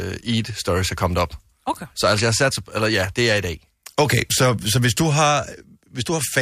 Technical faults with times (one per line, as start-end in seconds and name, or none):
none